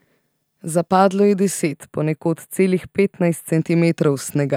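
Channel delay (comb filtering), 1.73 to 3.53 s: one channel lags about a tenth of a millisecond, so summing notches frequencies from around 5 kHz, leaving the speech hollow and dull.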